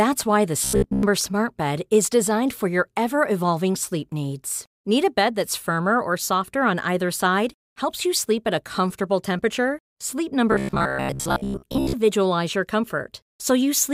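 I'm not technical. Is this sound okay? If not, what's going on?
No. From 0.64 to 1.03 s, right after "why the", and again from 10.52 to 11.95 s, speech turns into a stiff metallic buzz at 66.8 Hz. This is robotic sound from repeated short buffers. Audio likely arrived too slowly, so a 15 ms scrap was replayed over most of each stretch.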